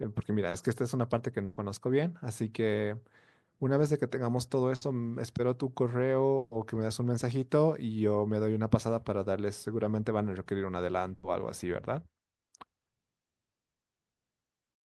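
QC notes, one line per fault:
0.49–0.55 s, short concealed packet loss: a brief smear where 40 ms never arrived in time and the receiver extended the preceding sound before blending back.
1.45–1.59 s, 4.75–4.83 s, 6.37–6.53 s, 11.15–11.25 s, burst of packet loss: held buzz or fading hiss, then a jump forward. Runs of packets were lost, 120, 60, 140 and 80 ms respectively, so the receiver continued the last sound and faded it, and that stretch of audio is gone.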